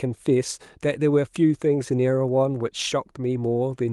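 Nothing stood out on listening to this speech clip, which comes over an Opus call path.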